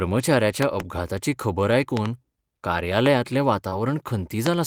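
Loud pops come first, at 0.63 to 0.82 s and again at 1.97 to 2.08 s. Each is a pair of sharp thumps, about 20 dB and then about 15 dB above the speech, which carries on underneath. A sudden voltage spike was added to the signal, likely from static, a switch or a driver glitch. Another single loud pop, about 15 dB up, lands at 3.06 to 3.08 s.

Short concealed packet loss follows at 3.69 to 3.74 s. About 20 ms of the stream reached the decoder too late, and the receiver bridged the hole by carrying the preceding sound forward for about 21 ms before blending back into the real audio. The result is a brief smear.

Inside that stretch, at 3.72 to 3.74 s, a lost packet was rebuilt from error correction. The next packet carried a low-bitrate copy of those 20 ms, and the decoder played it, so there is no gap. That moment sounds rougher and noisier than the audio around it.

A final loud pop, about 20 dB above the speech, strikes at 4.47 to 4.49 s.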